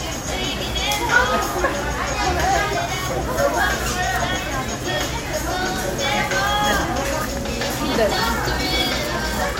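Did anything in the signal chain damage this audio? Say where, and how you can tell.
No, nothing in the signal chain damaged this audio.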